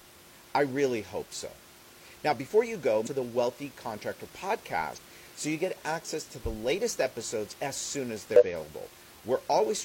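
At 3.02 s, just after "before you go", a short glitch cuts into the speech for about 50 ms. A second one follows at 4.93 s, lasting about 64 ms, right before "so you get access". A third comes at 8.36 s, about 67 ms long. All three are damaged data in a compressed stream. Corrupted bytes made the decoder misread frames and lose sync until it found the next valid header. The room noise sits about 22 dB below the speech.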